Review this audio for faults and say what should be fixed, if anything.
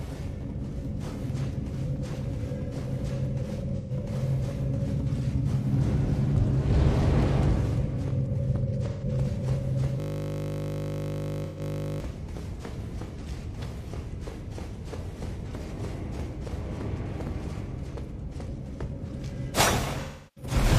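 AAC frame loss with concealment occurs at 3.77 s, 8.88 s and 11.45 s, each gap about 128 ms long, with a longer one of about 341 ms at 20.02 s. The decoder fills these gaps from the last good spectrum, producing smeared, noisy patches where the original detail is missing. To prevent it, add forward error correction or retransmission on the transport carrying the AAC stream.

A system hang loop runs from 10.00 s to 12.01 s. The host stalled while the audio hardware kept replaying a single 20 ms segment of its ring buffer, about a hundred times over. This produces a steady 50 Hz buzz in place of the audio. To prevent it, fix the driver or process stall and have the output mute on buffer underrun instead of recycling stale data.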